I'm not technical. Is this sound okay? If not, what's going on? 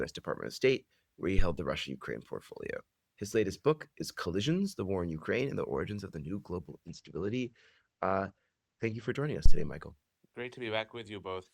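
No, there are two kinds of problems. At 1.39 s and again at 9.46 s you get a phantom power thump: a short, deep bump, each lasting about a tenth of a second. It's what happens when the microphone's power supply gets switched while the input is live, and that jolt comes through as a low thud.

Between 6.89 s and 9.17 s there's a call bitrate drop. The connection briefly thought it had less room, so the audio was squeezed much harder. For those two seconds it sounds rougher and duller, with the top end cut down to about 8 kHz, before it comes back clear.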